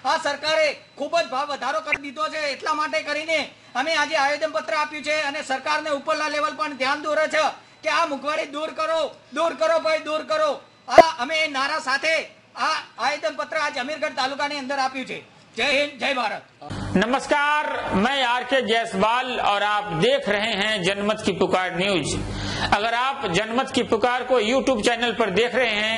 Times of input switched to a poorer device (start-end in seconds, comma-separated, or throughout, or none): none